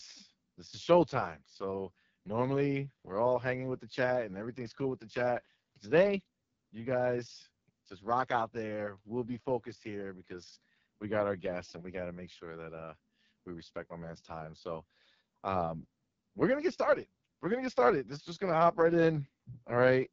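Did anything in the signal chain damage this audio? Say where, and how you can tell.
Yes, at the codec stage: the speech passed through the AMR wideband (HD Voice) codec, and the damage runs through the whole clip. The band stops at about 7.3 kHz, and the voice sounds rough and raspy throughout, which fits the lowest 6.6 kbit/s mode, where the pulse-excited vocal tract model is starved of bits. A plain low-pass filter would dull the sound without this rasp, and narrowband AMR would cut far lower, near 3.4 kHz.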